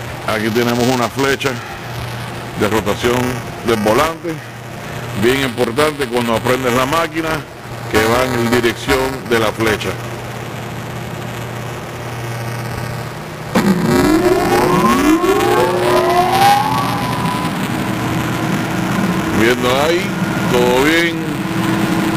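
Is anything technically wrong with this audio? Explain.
Yes. Buffer tearing runs throughout. The writer and the hardware reader of the ring buffer have drifted, so each period carries a small slice of audio a few milliseconds stale between hard joins. This makes a robotic buzz at about 345 Hz, which fits a 128-sample buffer, heard only while sound is present.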